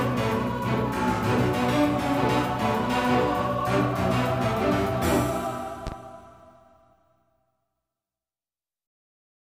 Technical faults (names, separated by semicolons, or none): loud pop